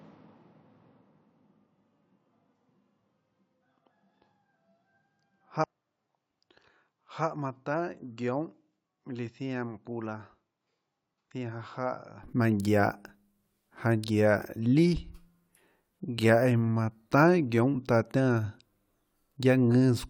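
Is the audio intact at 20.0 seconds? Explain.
Yes, the audio at 20.0 seconds plays through cleanly, with no dropout, click, distortion or other fault at that moment.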